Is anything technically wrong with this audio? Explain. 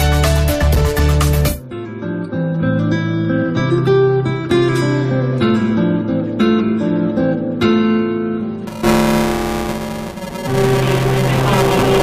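Yes. From 8.67 s to the end there is buffer tearing: writer and reader have slipped, so about a third of each period replays audio a few milliseconds stale. That gives a steady 375 Hz robotic rattle, fitting a 128-sample buffer, heard only with signal, unlike underrun dropouts, which leave gaps of silence.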